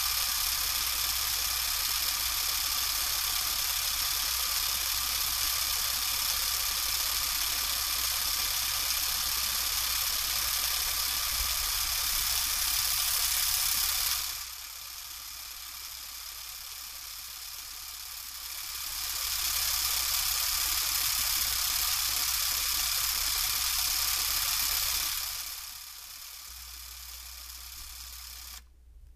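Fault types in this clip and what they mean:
Zipper noise: level changes applied in small unsmoothed steps, roughly fifty a second, each leaving a tiny click. Here a rapid ticking rides on the sound during a drop of about 10 dB near 14.1 s, a rise near 18.3 s, and a deeper fall near 25 s.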